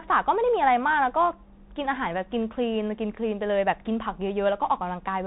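From start to finish the speech passes through a Bluetooth CVSD headset codec. The band stops near 3.8 kHz, and plainly audible codec damage sits on top: a granular hiss under the speech, s sounds turned scratchy, and loud, bright moments smeared where the one-bit up-down coding cannot climb fast enough, consistent with a 64 kbps link. A simple low-pass filter would dull the sound cleanly, without that grain or slope distortion.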